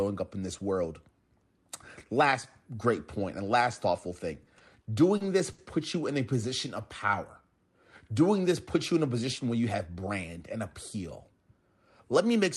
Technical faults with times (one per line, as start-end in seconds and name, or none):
4.45-5.60 repeated stalls (stutter)
6.81-7.46 jitter buffer slow-down
9.51-9.94 jitter buffer speed-up